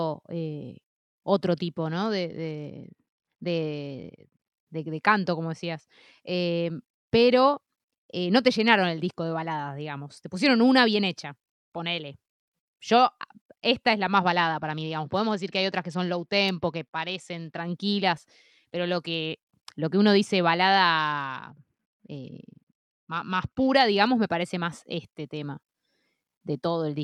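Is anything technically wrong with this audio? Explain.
Yes. The speech has three Bluetooth SBC bit pool drops, at 1.81–4.53 s (ending just before "de canto como decías"), 14.13–17.61 s (after "esta es la") and 20.99–23.75 s (between "lo que uno dice" and "digamos me parece más"). Each time the link is starved of bits, so the upper sub-bands get almost nothing and the rest are quantised coarsely. The treble turns dull and a gritty hiss rises. This fits a bit pool falling from 31 to 10, near 77 kbps. On a spectrogram the high band goes dark and blocky and the noise floor fills in, recovering cleanly at each end.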